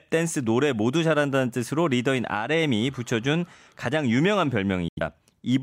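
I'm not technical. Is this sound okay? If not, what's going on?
No. From 4.88 to 5.01 s the speech cuts to silence: a digital broadcast dropout. Unlike a brief pause, that stretch of speech is simply missing, not delayed.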